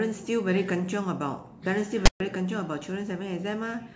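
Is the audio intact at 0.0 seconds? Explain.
Yes, the audio is intact at 0.0 seconds, with no fault present at that moment.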